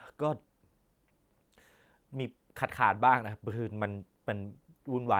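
The speech signal runs without any audible interruption, distortion or level disturbance at any point in the recording.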